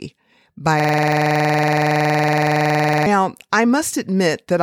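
From 0.80 to 3.06 s, a system hang loop: the system stalled while a 46 ms buffer replayed, buzzing at 21.5 Hz. The waveform shows identical repeating blocks, consistent with a 2048-sample buffer.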